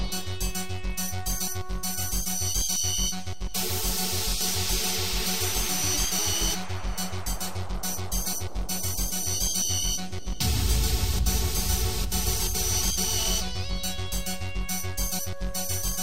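Nothing audible marks this fault, but throughout the clip the waveform sits off centre. This is a DC offset of about -32 dBFS: a constant shift added to every sample that shows as steady energy at 0 Hz and uses up some headroom.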